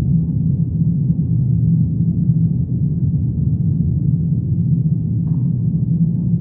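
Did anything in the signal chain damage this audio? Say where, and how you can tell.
No, none of the stages between source and playback left an audible mark on this audio. The sound carries no clicks, dropouts, distortion or level jumps that would point back to the wiring, converter, buffering, processing, network, storage or playback.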